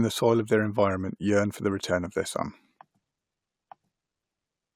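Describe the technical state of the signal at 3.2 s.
At 3.2 s the speech signal is intact, with no audible technical fault at that moment.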